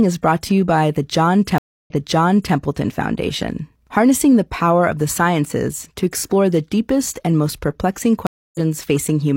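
Speech drops out twice. At 1.58 s it goes silent for about 0.28 s, then jumps back about 0.7 s so a stretch repeats, settling by 2.56 s. At 8.27 s, right after "deepest and most perplexing", another 0.28 s gap ends around 0.2 s further on, skipping audio, by 8.60 s. Both are a stream reconnect: the connection broke, the player restarted its decoder mid-stream, and playback resumed at a different point.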